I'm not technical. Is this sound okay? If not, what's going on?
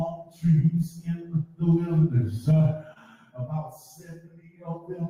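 No. This has gain pumping all the way through. Loud and soft parts sit too close together. The likely cause is a recording level set far too high, with an automatic limiter pulling it down hard.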